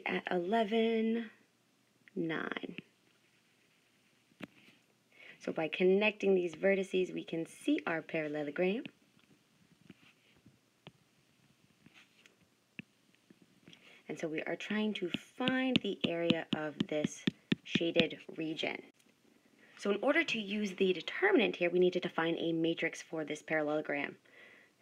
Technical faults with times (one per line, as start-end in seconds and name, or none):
8.42-24.82 Wi-Fi interference